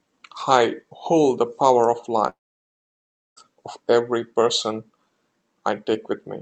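From 2.29 to 3.39 s the speech drops out for about 1.1 s, likely a long network dropout. The receiver extends the last sound into a short fading buzz, then about 1.0 s of near silence follows before audio resumes with that stretch missing.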